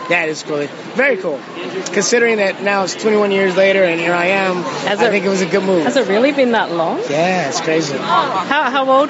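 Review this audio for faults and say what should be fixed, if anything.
Gain pumping runs through the whole clip, likely from input gain set far too high, so a fast limiter clamps down on every loud sound. The gain ducks by roughly 5 dB under loud moments, squashing the dynamics. Lowering the microphone gain so the limiter rarely engages would prevent it.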